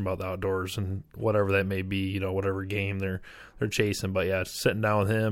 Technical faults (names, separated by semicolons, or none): none